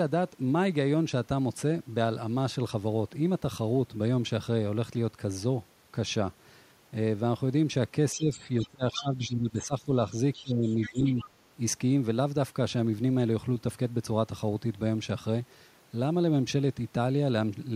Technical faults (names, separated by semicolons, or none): speech suppressed in double talk; other side's voice leaking through